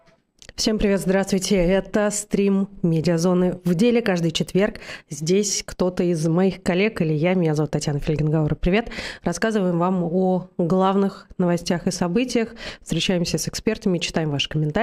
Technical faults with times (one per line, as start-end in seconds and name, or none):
none